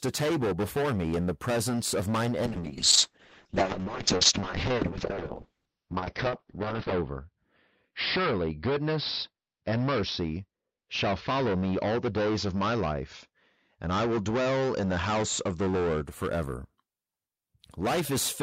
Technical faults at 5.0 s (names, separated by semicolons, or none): hard clipping; call bitrate drop